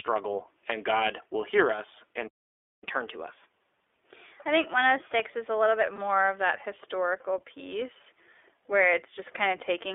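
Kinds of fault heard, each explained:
iLBC codec: the whole clip comes through a narrowband VoIP codec that codes each 20 ms frame on its own, and here its damage is plainly audible. The band runs roughly 300 Hz to 3.5 kHz, so the speech sounds thin and boxed-in with nothing airy on top, and there's a rough, slightly synthetic edge. The steady character points to a rate of around 15 kbps.
Playback stall: at 2.27 s the speech just cuts out and the output sits silent for about 0.55 s before picking up again at 2.84 s. That kind of dead gap in mid-flow is what you get when the player runs dry of data or its thread gets blocked, so likely a buffer underrun. It isn't a dropout in the signal itself.
Catch-up at higher speed: straight after the stall, from 2.84 s to 5.84 s, the player rushes through its backlog at 1.1 times normal speed. Because it's doing this by resampling, the pitch goes up along with the tempo, by roughly a semitone and a half, so the speech sounds a touch hurried and raised. 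Then it settles back to normal.
Lost iLBC frames: at 5.96 s there's a brief blip lasting 20 ms, which fits a single lost frame. The decoder papered over it by repeating the last pitch cycle with a bit of noise, giving a tiny held, faintly buzzy smear. Since iLBC frames don't depend on each other, the speech snaps back right away.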